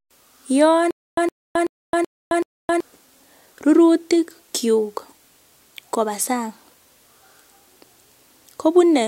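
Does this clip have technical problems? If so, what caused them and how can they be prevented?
Yes. From 0.91 s to 2.80 s the speech catches on a 113 ms burst that repeats five times, each followed by 266 ms of dead silence, a steady 379 ms cycle. This stutter with silent gaps likely comes from playback stalling, replaying the last fragment at each retry and then running empty, so the audio due in that span is lost. A larger playback buffer and a steadier network or disk feed would prevent it.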